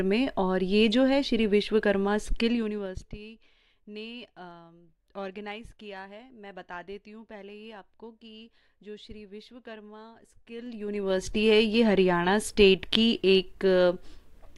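A level change applied in unsmoothed 2 dB steps, around fifteen a second, causes zipper noise from 2.36 to 3.2 s as the sound drops by roughly 20 dB, and again from 10.48 to 11.28 s as it rises back. Each step clicks, giving a rapid ticking over the fade.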